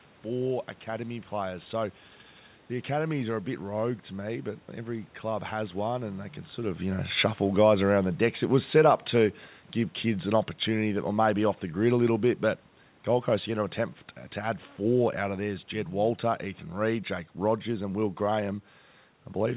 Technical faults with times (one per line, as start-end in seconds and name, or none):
7.05-13.59 automatic gain falling